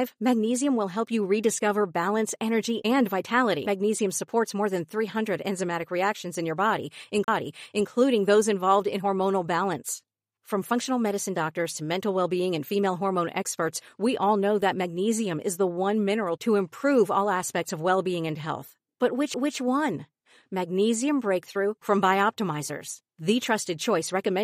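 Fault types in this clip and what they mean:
CD skip: the laser jumps to another turn of the disc's spiral, so playback mutes briefly and resumes elsewhere. This speech has three: a tick at 3.66 s after "rediscover balance energy and", a dropout of roughly 40 ms from 7.24 to 7.28 s between "enzymatic reactions in your" and "those involved in hormonal", and a tick at 19.34 s. Waveform: short flat gaps with abrupt edges. Spectrogram: thin vertical broadband stripes.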